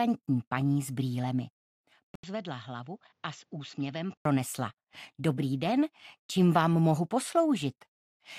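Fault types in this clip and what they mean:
Input switched to a poorer device: At 2.15 s the sound drops out for about 80 ms, then returns duller and boxier, with nothing above 7.6 kHz, roughly 10 dB quieter, and carrying a faint new noise floor far below the signal. At 4.25 s the fuller, brighter sound comes back. The likely cause is the system switching its input mid-recording to a narrower-band microphone or headset profile with its own tone, level and noise, then switching back.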